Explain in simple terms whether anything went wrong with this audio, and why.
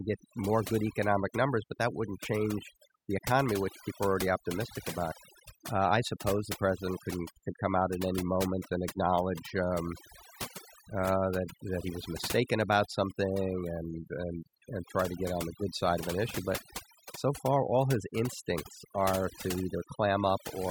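For the whole clip, in the pauses the background drops and breaks up into twinkling, warbling specks. This is overdone noise removal. A noise reduction tool was turned up too far on a noisy recording, so it shut off individual frequency bands whenever they came close to what it judged to be noise. The quieter parts of the voice were caught in those bands and removed along with the noise.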